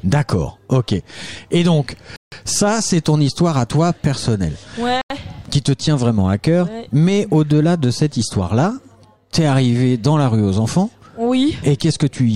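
At 2.16 s the sound drops to complete silence for about 160 ms, resuming at 2.32 s, and at 5.01 s it cuts out again for about 90 ms until 5.10 s. Both gaps are likely a Bluetooth stall: held-up packets let the headphones' buffer run dry, so playback paused until resent data arrived. On a waveform each shows as a flat line with abrupt edges; a spectrogram shows a clean vertical blank band across all frequencies.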